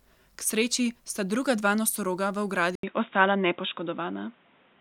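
Speech, with a sudden drop in quality at 2.75 s. A gap of 80 ms comes first. After it, nothing is heard above 3.8 kHz until the end. A faint new background noise appears, and the level shifts by about 5 dB. The input likely switched to a poorer device.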